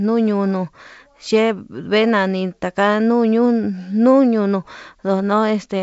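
This speech clip, carried over G.722 wideband telephone coding with its band ending near 7.7 kHz, has nothing technically wrong with it.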